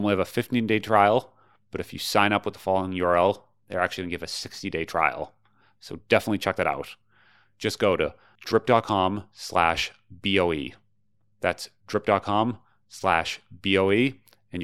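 No technical faults are audible.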